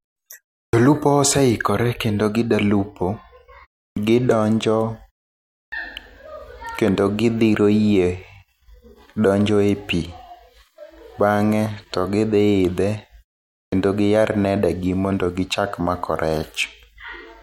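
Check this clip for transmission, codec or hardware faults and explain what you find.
The speech has one hardware fault: clipped start after a pause. It occurs at 0.66 s before "oseikore kendo gidwa lupo", at 3.89 s, at 5.65 s, and at 13.65 s before "giyar nede go mondo". Each follows a silence of 0.3 to 0.62 s. In that gap the output device drops into a sleep state. It needs about 73 to 75 ms to wake again. Those first milliseconds of sound are swallowed. Each word therefore starts abruptly, missing its opening sounds.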